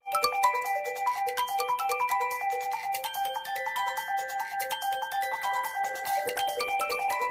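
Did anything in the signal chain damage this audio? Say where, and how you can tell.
Yes. From 5.33 s to the end at 7.3 s the sound turns rough and muffled, its top end cut away. That is a call bitrate drop: the bandwidth estimate fell, so the encoder went from 48 to 15 kbps, coding coarsely and discarding high frequencies.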